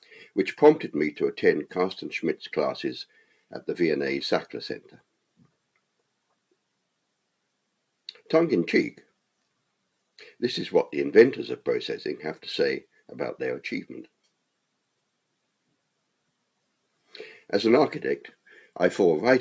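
Sound cut by the noise suppressor, from 3.1 to 3.52 s: the suppressor mistook part of the audio for background noise and pulled it down harder than its surroundings, by about 12 dB at the deepest point. Around a fifth of a second of that window is affected, so the sound briefly sinks in level. The call microphone processing is also audible, with nothing above 8 kHz.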